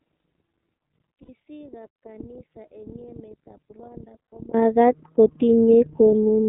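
Throughout, the iLBC codec limits the sound to roughly 150 Hz to 3.6 kHz, leaving an empty spectrogram above the cutoff and a slightly rough, synthetic quality consistent with 13.33 kbps, 30 ms frames.

From 0.0 to 4.54 s the audio sits about 30 dB lower, faint, most likely because one channel is inverted and cancels on mono summing. The waveform is nearly flat until it jumps at 4.54 s.

Lost iLBC frames at 1.22 to 1.29 s and at 4.31 s are concealed by a held, buzzy vowel-like tone, showing on the spectrogram as smeared, repeated harmonics, consistent with two lost frames each time.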